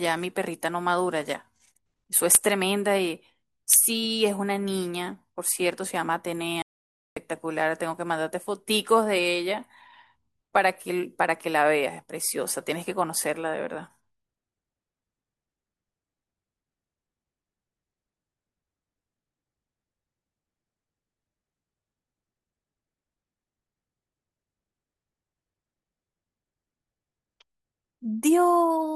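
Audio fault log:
6.62–7.17 s, audio dropout to silence. The speech cuts off abruptly mid-flow and returns about 0.55 s later. The gap is dead digital silence, with no room tone at all. The input was likely lost briefly while recording continued, so whatever was spoken there is gone.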